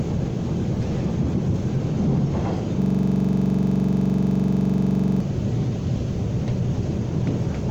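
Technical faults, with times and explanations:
2.82–5.20 s: system hang loop. The system froze while the sound hardware kept replaying its last buffer. A 42.67 ms slice repeats about 56 times, giving a rigid buzzing stutter at 23.4 Hz. That length fits a 2048-sample buffer.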